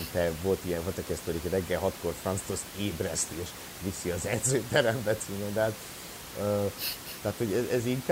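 No system faults are audible in the speech; the only background is room noise at about 13 dB below the voice, captured along with the recording.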